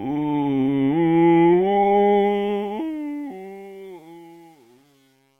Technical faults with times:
2.16-5.39 truncation distortion on a fade

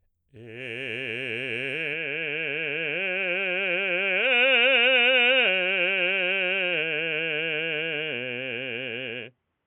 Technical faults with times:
1.93-9.66 input switched to a poorer device

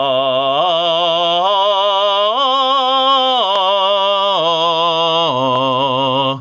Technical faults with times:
0.00-6.41 gain pumping

